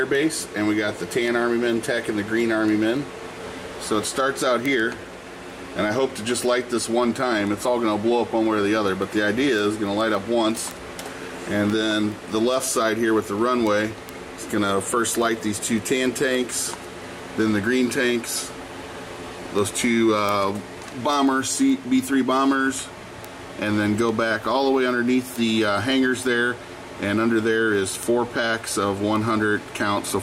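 A receiving device running on its own clock, not locked to the sender's over the digital link, drifts against it by something like 150 parts per million, which produces word clock ticks. Each time the two clocks slip past each other, a sample is dropped or repeated and its neighbours are misread. The result is a steady train of sharp clicks of uneven strength roughly every 0.15 s, from 0.15 s to 30.14 s, around two hundred in all.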